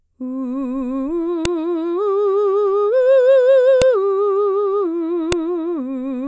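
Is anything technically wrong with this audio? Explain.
Yes. The music carries a file header played as audio: separately stored WAV pieces were joined without their headers being stripped, so each header's few dozen bytes of metadata were read as sample values. Since those bytes bear no relation to the waveform around them, each join produces a sharp, loud click or snap, heard at 1.45 s, 3.82 s and 5.32 s, marking the start of each new piece regardless of what the music is doing.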